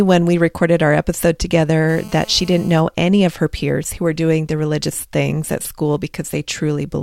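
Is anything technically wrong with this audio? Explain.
Yes. From 1.89 to 2.81 s there is GSM phone buzz: a nearby 2G handset on a call pulses about 217 times a second, and the audio circuitry rectifies those bursts. The result is a harsh, raspy 217 Hz buzz, about 24 dB below the speech, rich in harmonics and far edgier than smooth 50 or 60 Hz mains hum.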